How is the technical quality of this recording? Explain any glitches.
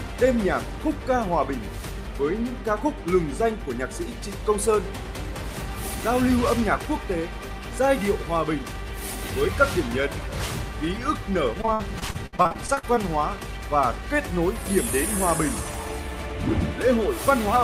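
From 11.61 to 12.98 s the sound turns choppy and robotic. This is repeated packet loss: lost audio, in gaps up to 61 ms, was patched by extending the preceding sound, covering about a third of the stretch.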